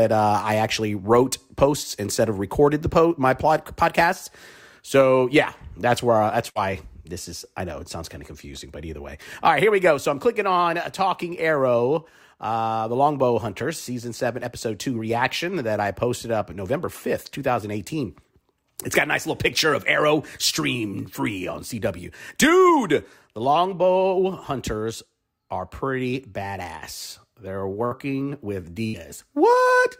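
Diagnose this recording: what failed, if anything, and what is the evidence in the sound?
Three brief dropouts, at 6.49 to 6.58 s, 27.85 to 27.94 s and 28.87 to 28.96 s, each lasting about 90 ms. In each, the last sound is held and fades away for roughly 60 ms, then the audio picks up further along with about 60 ms skipped. This is a burst of packet loss at the network stage: consecutive packets never arrived in time, so the receiver's concealment stretched and faded the preceding audio before jumping ahead.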